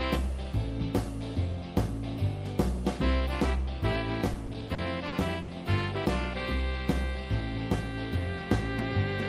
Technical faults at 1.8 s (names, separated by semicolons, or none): none